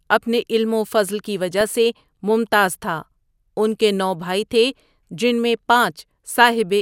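At 1.61 s, between "علم وفضل کی" and "سے ممتاز تھا ان", DAB burbling: residual bit errors, a fraction of a percent, corrupt sub-band samples, giving brief blips of noise.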